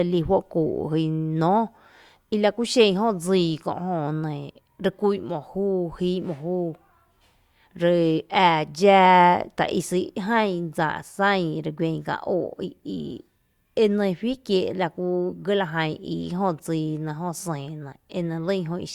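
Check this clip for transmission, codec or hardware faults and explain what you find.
Nothing in this speech recording points to a fault anywhere in its chain. There is nothing further to report.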